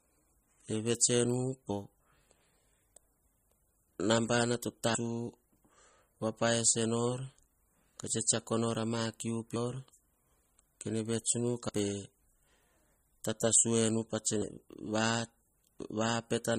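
MP3 compression, throughout: the speech sounds watery and swirly, with smeared attacks and nothing above 15 kHz, likely from heavy MP3 encoding at a low bitrate around 32 kbps. Dropped buffers (overrun), at 4.95 s and 11.69 s: the sound jumps ahead with no gap, likely because samples were overwritten before being read. About a third of a second is lost at the first and about a tenth at the second.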